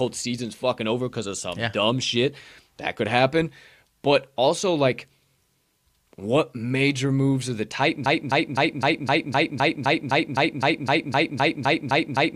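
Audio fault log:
8.06–12.36 s, broken-record loop. A 257 ms fragment repeats exactly, back to back, 17 times, running to the end. Whatever should have followed is gone. The likely cause is a stalled player or stream that kept resending its last held fragment.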